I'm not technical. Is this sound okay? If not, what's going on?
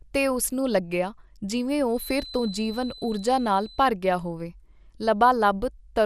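No. Two problems can be heard.

The whole clip has the dull, gurgling sound of MP2 compression. This is likely from saving it with an old digital radio-style format at too low a quality. That format splits sound into many narrow slices and drops the ones it can't afford. Here nothing above 15 kHz survives, so the voice lacks sparkle. What remains sounds grainy and watery.

From 1.90 to 3.90 seconds there is a feedback whistle. It is a thin, steady tone at 4 kHz, quiet and well below the speech. It swells and fades slowly. It is likely caused by a loudspeaker feeding back into the microphone, just short of a full howl. The sound loops round and one pitch keeps ringing for those two seconds.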